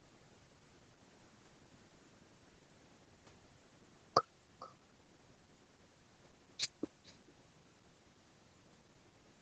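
Throughout the speech, each phrase is followed about half a second later by a faint copy, roughly 27 dB below the direct sound. This is echo with no canceller: the far end plays the call through a loudspeaker, its microphone picks it up again, and nothing removes it before it returns over the network. The copy is thin, sitting behind the talker's own sound, and the whole call is band-limited to 8 kHz by the codec path.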